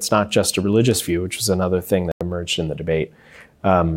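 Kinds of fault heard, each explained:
corrupt FLAC frame: at 1.05 s, after "not just a religious", damaged bits derail the decoder's prediction, producing a brief error peaking at about -27 dBFS.
corrupt frame muted: from 2.12 to 2.21 s, after "which was another thing", a rejected frame is replaced by silence, leaving an abrupt 94 ms hole before "in the".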